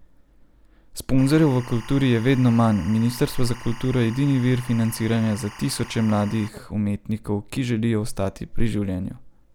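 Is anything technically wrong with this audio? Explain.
Yes. From 1.18 to 6.48 s, timecode bleed: 24-frame-per-second timecode leaks in, a square wave flipping near 1 and 2 kHz, chirping about 20 dB below the speech.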